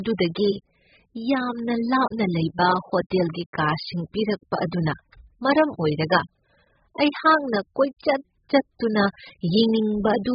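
Throughout, nothing sounds above 5.1 kHz and the speech warbles and smears, fitting likely AAC compression at about 8 kbps. A plain low-pass filter wouldn't warble.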